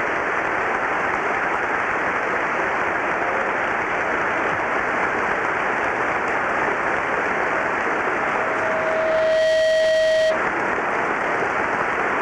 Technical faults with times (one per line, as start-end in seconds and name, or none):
7.94-10.48 loudspeaker feedback squeal